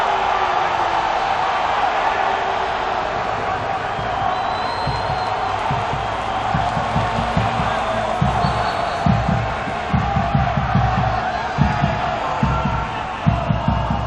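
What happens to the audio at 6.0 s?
At 6.0 s the audio carries a doubled audio track, and this fault runs throughout the clip rather than starting there. A second, full-band copy of the same sound trails the original by around a fifth of a second, a few decibels quieter. Each event is followed by a clean, dry repeat with no decay or room colour, unlike a natural echo. The likely cause is the sound being captured again through a slower path and mixed back in.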